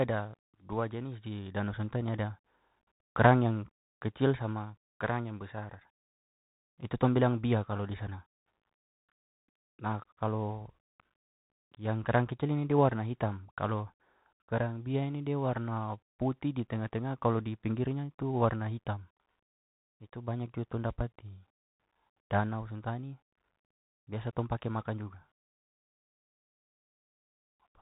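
From start to finish the speech is carried over a Bluetooth CVSD headset codec, and it sounds plainly damaged: nothing above about 3.8 kHz, scratchy s sounds, a grainy hiss underneath, and roughness on loud bright moments where the one-bit step can't keep up, which fits a 64 kbps CVSD link.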